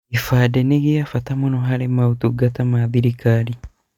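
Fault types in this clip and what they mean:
No fault types are present in this clip.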